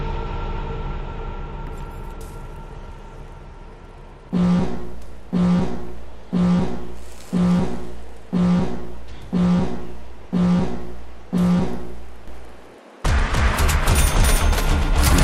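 At 12.28 s a doubled audio track cuts in abruptly. An equally loud, dry copy trails about 300 ms behind to the end, likely from a slower second capture path.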